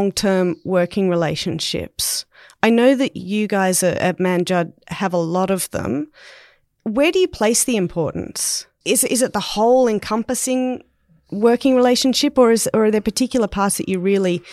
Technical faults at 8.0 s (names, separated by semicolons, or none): none